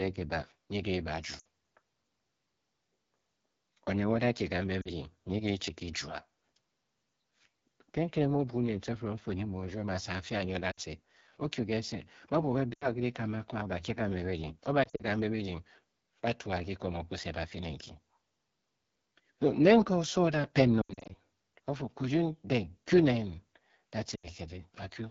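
The whole clip carries the AMR wideband (HD Voice) codec at 8.85 kbit/s, one of its two lowest rates. At that rate the speech model is starved of bits. Speech sounds rough and raspy throughout, and the damage is plainly audible. The band above 6.4 kHz is filled with shaped noise, not real detail.

Lost AMR speech frames break in seven times. Radio errors corrupted frames, so the decoder repeated the last good settings at falling gain. Short runs drop to near silence: 1.39 to 1.44 s, 4.82 to 4.88 s, 10.71 to 10.80 s just after "a nyi o da", and 12.74 to 12.87 s. From 14.84 to 15.02 s, before "kambe birdying", losses scatter over 160 ms. The worst is 20.81 to 21.15 s, with an 80 ms run that fades toward silence. The last follows "da a" at 24.15 to 24.28 s.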